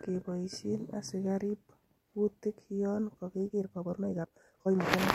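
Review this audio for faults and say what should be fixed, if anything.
From 3.47 s to the end, the speech suddenly turns rushed while its pitch stays put: a time-stretched section running about 1.78 times faster. This likely comes from software squeezing that stretch to fit a length, dropping short slices to keep pitch. To prevent it, re-edit or re-record that passage to the needed length instead of compressing the audio in time.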